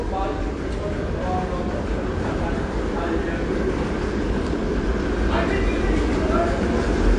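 AAC compression damage runs through the whole clip, from start to end. Nothing reaches above about 9.8 kHz, so the top octave is simply missing and the sound comes across dull. The band limit and the plainly audible smearing and fizzy, warbling texture on sustained parts point to an encoder starving its bits, likely AAC-LC at a low rate near 32 kbps, lowering its cut-off and quantising the remaining frequency lines too coarsely.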